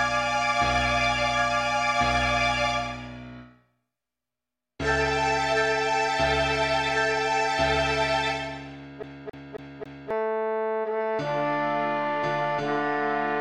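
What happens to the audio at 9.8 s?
At 9.8 s the sound is caught in a fast, even stutter: the same 0.27 s snippet plays again and again, four times in all, with a short mute at each jump, from 9.03 to 10.1 s. This is a CD stuck on one turn, where a scratch keeps throwing the laser back one track.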